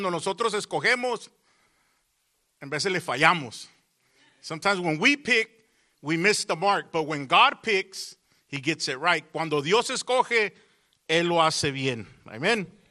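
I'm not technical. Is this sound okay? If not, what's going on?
No. From start to finish the sound is dull, with a gurgling, grainy roughness, the kind familiar from weak digital radio. This is most likely MP2 compression: the format splits the sound into many narrow slices and, when squeezed hard, drops the top slices and stores the rest crudely. Simple muffling would just lose brightness; here the brightness flickers in and out and the remaining sound turns granular.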